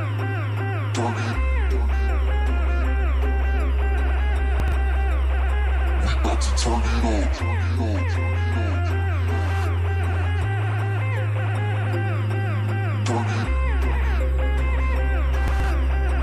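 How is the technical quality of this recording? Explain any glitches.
The recording has two brief glitches of the same kind. Chunks out of order occur at 4.6 to 4.72 s and 15.48 to 15.64 s: a 40 ms chunk plays two chunks late, then three chunks late. Nothing is lost, but each reshuffle leaves three hard joins and a jumbled moment.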